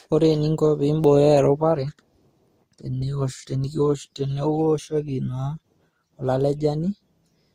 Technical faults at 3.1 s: transcoding between lossy codecs

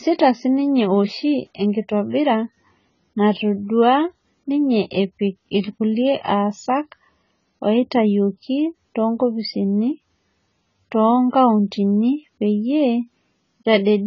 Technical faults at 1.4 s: AAC compression

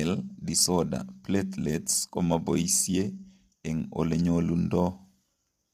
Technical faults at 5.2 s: low-delay AAC compression

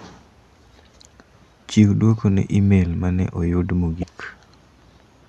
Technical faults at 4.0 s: damaged data in a compressed stream

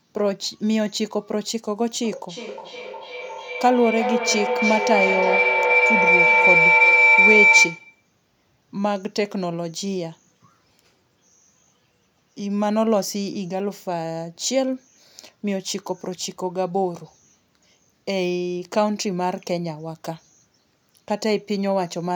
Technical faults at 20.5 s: none

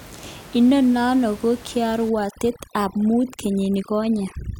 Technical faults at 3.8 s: overdone noise removal

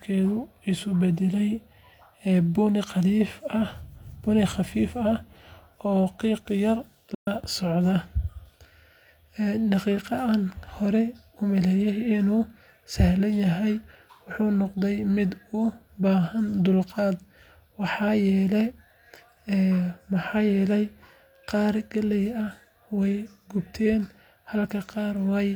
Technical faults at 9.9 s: none

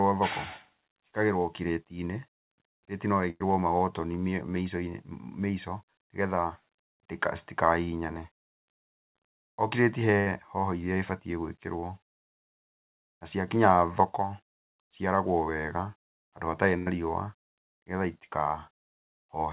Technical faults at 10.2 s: burst of packet loss

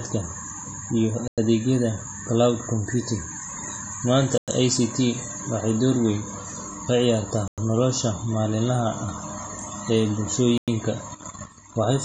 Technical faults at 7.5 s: AAC compression; gap between chunks

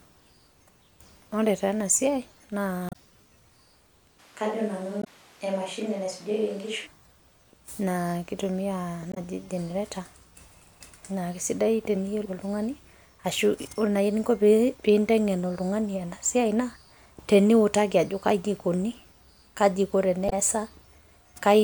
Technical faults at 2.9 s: damaged data in a compressed stream

